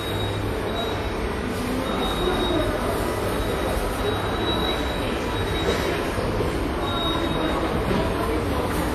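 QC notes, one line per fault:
Throughout WMA compression, likely near 48 kbps: long-block quantisation noise rings and breathes with the sound; spectrogram shows zeroed holes, nothing above 16.2 kHz.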